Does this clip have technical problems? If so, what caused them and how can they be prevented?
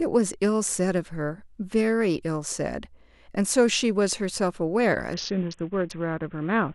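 Yes. From 5.14 s to the end, a Bluetooth SBC bit pool drop starves the encoder. The sound fits the bit pool falling from about 28 to 5, roughly 54 kbps. The upper sub-bands lose their bits, so the speech turns dull and gritty. Keeping the link uncongested, with the devices close and 2.4 GHz interference reduced, lets the bit pool stay high.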